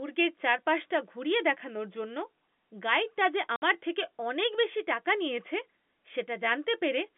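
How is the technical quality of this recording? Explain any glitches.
The recording has one glitch: a short hole of silence in the middle of the speech, heard against telephone-band audio limited to roughly 200 Hz to 3.5 kHz by G.711 coding.

From 3.56 to 3.62 s, right after "গাইডটা যে" and before "থেকে অনেক বেশি টাকা", there is packet loss filled with silence. About 60 ms of audio never arrived, which fits three lost 20 ms packets, and the receiver played nothing in their place. The sound stops dead and restarts with hard edges. Unlike loss concealment, there's no repeated or fading fill. The gap is pure silence.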